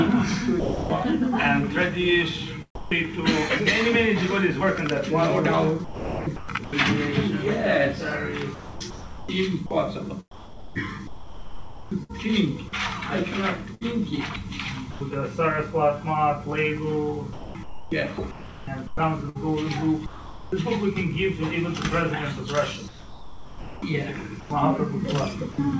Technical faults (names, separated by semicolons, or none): sound dropped by the voice detector; sound chopped by the voice detector